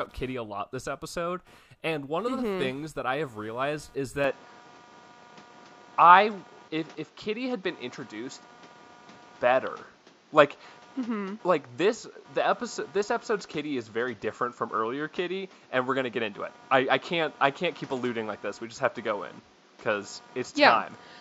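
Speech, recorded with computer activity noise throughout: a faint buzzing chirp pulsing around 200 times a second, roughly 30 dB below the speech. It follows the machine's processor or graphics load through the shared ground rather than the talking, which separates it from steady mains hum. At 4.24 s, right after "I have realized is", the sound abruptly turns duller and boxier, with nothing above 7.6 kHz, a level shift of a few decibels and a new noise floor about 30 dB down, all without any gap. It stays that way to the end, and the cause is likely the input switched to a poorer device. A sudden, lasting change in band, tone and noise together points to a device change rather than gradual filtering or a gain ride.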